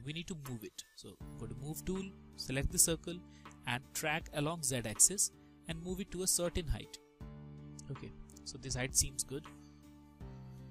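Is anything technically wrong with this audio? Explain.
Yes. From 7.28 to 8.92 s the top end dulls; channel delay (comb filtering): one channel lags about 0.04 ms, a couple of samples, so mono summing notches highs near 10 kHz.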